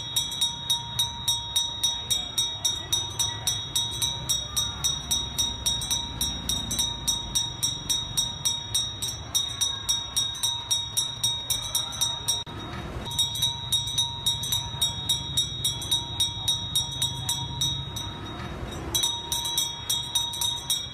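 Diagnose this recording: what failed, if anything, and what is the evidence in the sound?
GSM signalling bursts from 9.75 to 12.83 s: galloping ticks and brief 217 Hz buzzes, roughly 20 dB down, where analogue wiring rectifies a nearby phone's radio bursts.

GSM phone buzz from 12.92 to 15.22 s: steady, raspy 217 Hz buzz rich in harmonics, about 27 dB down, the analogue stage rectifying the phone's call transmission.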